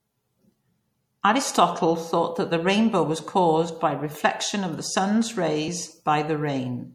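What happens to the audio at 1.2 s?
Likely MP3 compression throughout, fitting a 64 kbps encode: weak frequency lines flicker on and off, so the speech sounds watery and swirly, with nothing above 19.5 kHz.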